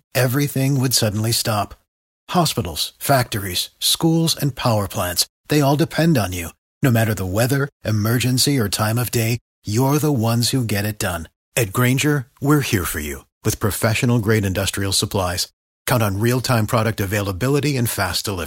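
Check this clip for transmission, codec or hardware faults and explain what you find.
There's one fault here, sample clock jitter, and it runs through the whole clip. The converter's clock wobbles by something like a microsecond, so each sample lands a touch early or late. On steep parts of the speech waveform that timing slip turns into an amplitude error, sitting roughly 35 dB below the signal. You hear it as a faint hiss or grittiness that swells on loud, bright sounds like sibilants and disappears in the pauses.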